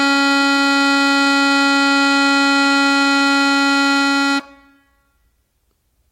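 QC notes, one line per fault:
2.45 to 4.45 s, scattered short gaps: around ten tiny holes in the music, the longest about 15 ms, each patched by extending the preceding sound, adding 22 ms overall. Heard as brief ticks and smears; the waveform shows brief repeated cycles, the spectrogram thin vertical seams.
4.67 to 5.61 s, jitter buffer slow-down: the receiver repeated single pitch periods to rebuild its reserve, stretching the passage by 75 ms to 93% speed at unchanged pitch. Notes drag; the waveform shows duplicated periods, the spectrogram horizontally stretched harmonics.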